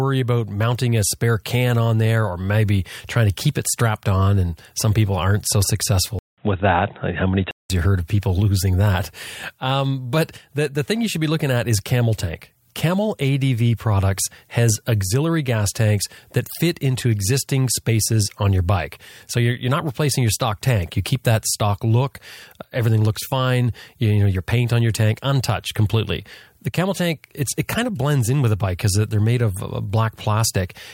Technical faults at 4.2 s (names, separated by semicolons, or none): none